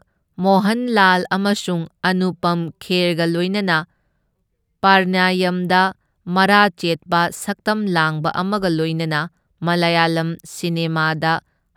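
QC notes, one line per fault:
No audible faults were found on review.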